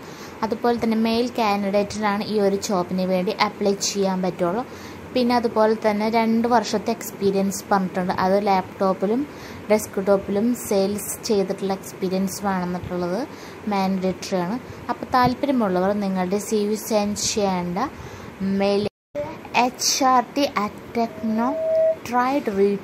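At 21.09 s a microphone begins picking up the loudspeaker it feeds, and the loop gain tips past one at 643 Hz. This loudspeaker feedback squeal swells over well under a second into a steady tone a few decibels above the sound, until 22.0 s.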